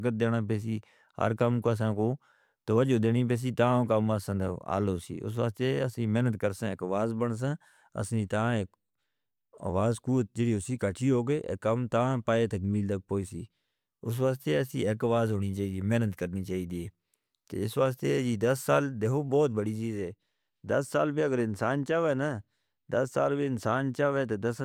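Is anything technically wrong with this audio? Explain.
No, the signal shows no technical faults anywhere in the recording.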